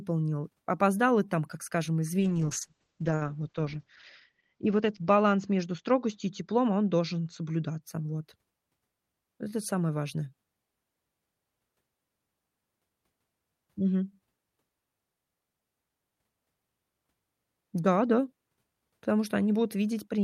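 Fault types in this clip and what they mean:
Call bitrate drop: After "и там как скажем", at 2.21 s, bitrate falls from 40 to 8 kbps. High frequencies vanish above 8 kHz. Speech turns rough and muffled until 7.87 s.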